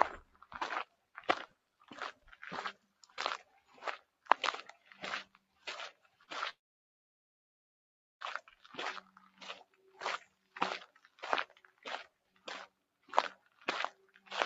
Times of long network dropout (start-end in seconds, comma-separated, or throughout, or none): 6.49-8.23